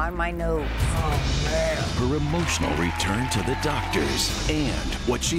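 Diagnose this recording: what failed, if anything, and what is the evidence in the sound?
Nothing failed in this recording, and the sound shows no evidence of a fault at any stage.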